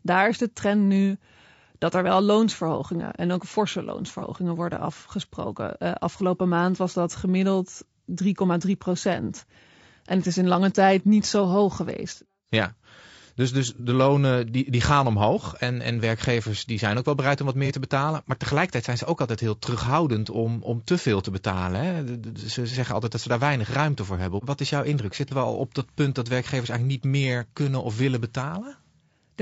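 Across the whole speech clip the sound is rough and grainy, with noise filling the gaps between pitch harmonics and a thin, somewhat synthetic top band. The damage is plainly audible. This points to low-delay AAC compression, likely AAC-ELD at a rate consistent with 32 kbps. Its short frames of about 30 ms each code about 500 frequency lines, and at this bitrate too few bits remain to code the spectrum cleanly.

Five brief dropouts show AAC frame loss with concealment. They occur at 4.19–4.23 s, between "loonsverhogingen en ook forse" and "worden afgesproken"; at 6.17–6.21 s; at 13.76–13.80 s; at 17.66–17.71 s, between "wel bereid om wat" and "te betalen"; and at 25.28–25.32 s, between "is jouw indruk" and "we al op dat". Each matches one missing frame, about 30 ms. The decoder rebuilt it from the previous spectrum, so each patch sounds momentarily smeared and noisy rather than silent.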